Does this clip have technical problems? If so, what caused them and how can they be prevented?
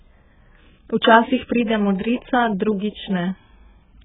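Yes. AAC compression runs throughout: nothing above 3.7 kHz, smeared, warbling speech, heavy damage likely from AAC-LC starved of bits, fitting roughly 8 kbps. Encode at a higher bitrate to prevent it.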